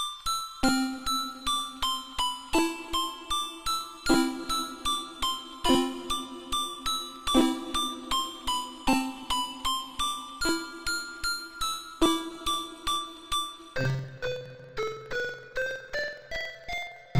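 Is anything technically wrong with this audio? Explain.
Yes. From 13.76 s to the end at about 17.2 s, the sound drops an octave, turns doubled and choppy, and flutters at about 21.5 Hz. This is interleaved audio read as planar. Each block of alternating left and right samples was split so its first half became one channel and its second half the other, each stretched to fill the whole block. The 46.44 ms blocks, which fit a 2048-sample block size, play at half speed and 12 semitones down while keeping overall pace.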